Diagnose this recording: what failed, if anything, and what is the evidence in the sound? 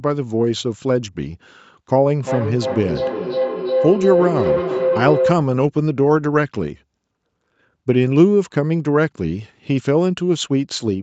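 Feedback howl runs from 2.21 to 5.53 s. It is an acoustic loop in the call chain: a second device in the same room plays the call aloud and its microphone picks it back up. Each trip adds gain, so the repeats swell instead of dying away and collapse onto a tone of around 500 Hz, pulsing roughly every 300 ms at the loop delay. At its peak the howl reaches about 1 dB below the speech, and it stops once the loop is broken.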